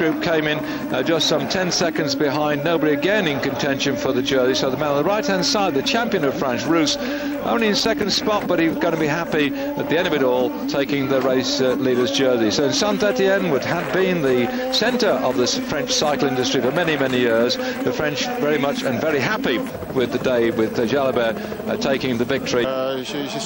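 From 7.80 to 8.16 s there is processor overload crackle. The processor could not fill its short buffers, around 5 ms each, in time. About seven deadlines were missed, each leaving a hard-edged silent gap. Together they sound like a gritty, tearing burst over the sound.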